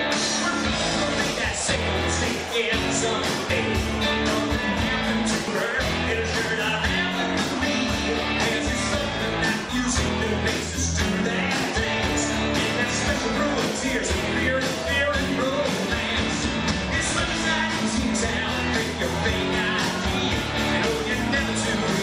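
Tiny skips at 0.53, 2.51, 3.50 and 5.48 s, on one-second segment boundaries: overlap between stream segments, where about 5 to 12 ms gets trimmed and the waveform jumps.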